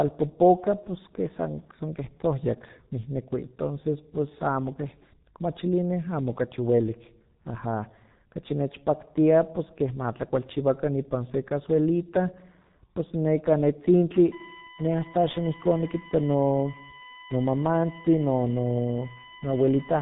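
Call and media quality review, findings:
Speech, G.723.1 codec throughout: muffled, hoarse, consonants smeared. Spectrogram shows hard ceiling near 3.8 kHz, empty band above; coarse, blocky formant detail. Heavy low-rate damage consistent with 6.3 kbit/s, 30 ms frames, slowly updated voice model.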